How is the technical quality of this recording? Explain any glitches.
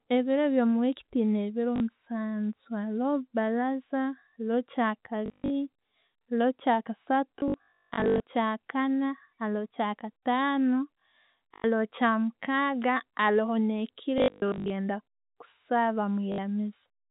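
The recording is marred by repeated dropouts over a telephone-band G.711 path, with nothing above 4 kHz. Packet loss with last packet repeated occurs at 1.76–1.8 s after "byo muweeki tuyina ebiro", 5.26–5.5 s, 7.40–8.2 s before "kyakaana haroho kyakataanu", 11.54–11.64 s, 14.18–14.7 s, and 16.32–16.38 s. Missing audio, which fits 20 ms packets, was filled by replaying the last packet. The repeated runs buzz near 50 Hz, giving robotic stutters.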